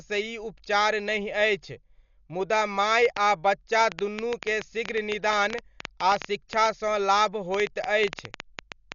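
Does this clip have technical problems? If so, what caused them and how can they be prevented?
Yes. The speech is dull and muffled from start to finish, with nothing above 7 kHz. A rough, fluttering noise surrounds the voiced sounds. This is heavy Dolby Digital compression, likely from encoding at a very low bitrate, around 48 kbps. At that rate the AC-3 encoder narrows the band and starves many frequency lines of bits. The decoder then fills those gaps with noise. Encoding at a higher bitrate would prevent it.

From 3.05 s to 8.93 s a train of clicks ticks over the audio. The clicks come about 6.8 times per second at an uneven pace, some forty in all. They are similar in shape and peak roughly 15 dB above the speech. They carry on through pauses too. A likely source is electrical interference from nearby equipment or a faulty connection or power supply injecting pulses. Shielding cables and keeping the interface stable would prevent it.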